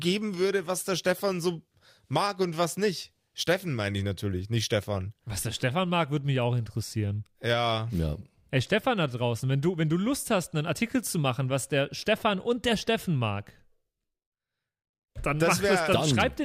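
Nothing stood out as a technical fault on listening to the speech in this recording.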